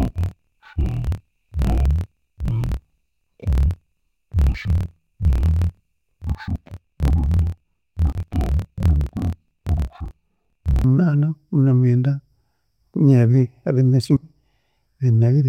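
Speech, with interleaved audio read as planar from 0.0 to 10.84 s: each 26 ms block plays split halves at half speed, giving dull, robotic speech an octave low with a 38 Hz flutter. Unlike a plain pitch shift, the pace stays normal.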